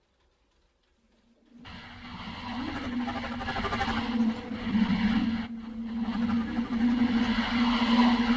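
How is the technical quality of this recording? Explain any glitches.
The recording has two glitches, both from a call-style path. Throughout, the top end stops at 8 kHz, which fits a G.722 codec.

From 4.49 to 5.57 s there are scattered short gaps: about seven tiny packet losses, each around 10 ms, patched by extending the previous sound. You hear brief ticks and little smears.

From 6.09 to 7.15 s there's a jitter buffer slow-down. The receiver repeated single pitch periods to rebuild its reserve, adding 64 ms. The sound runs at 94% speed at unchanged pitch, so it feels slightly drawn out.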